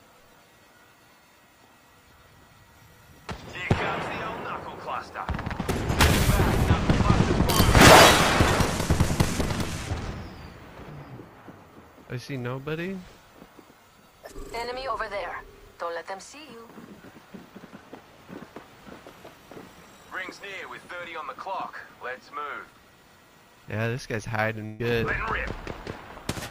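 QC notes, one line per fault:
24.65 to 24.81 s, burst of packet loss: about 140 ms went missing, and the receiver stretched the last sound and faded it down before playback jumped ahead.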